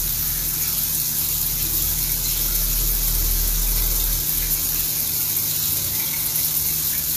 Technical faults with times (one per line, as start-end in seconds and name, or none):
0.00-7.16 HE-AAC compression